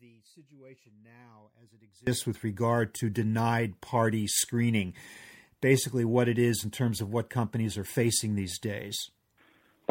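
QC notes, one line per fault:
0.00–2.07 s, audio dropout to a faint residue: the speech is already missing when the clip opens and returns abruptly at 2.07 s. The gap is not silent; a faint sound remains, roughly 30 dB below the speech's normal level. That points to the signal likely having been lost upstream while the rest of the path stayed live. A pause would hold room tone rather than this residue, and a fade would ramp instead of switching back in at once.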